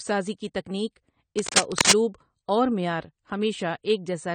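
A speech recording carries two faults. Throughout, the voice sounds dull and band-limited, with a watery, warbling edge on sustained vowels and a fizzy smear on sibilants. This points to AAC compression, likely AAC-LC at a low bitrate around 32 kbps, where the encoder cuts the top end and fills or drops spectral bands. Unlike broadband hiss or plain low-pass filtering, the damage moves with the signal and sounds swirly rather than simply muffled. From 1.38 to 1.92 s, just after "سازی کی تیکنک", a dense, uneven scratching rides over the speech, somewhat louder than the voice itself. This is cable scratch noise, likely from a worn connector or cable being moved so its contact resistance jumps about. What separates it from codec artefacts or clicks is its rough, continuous rustle confined to one half-second burst.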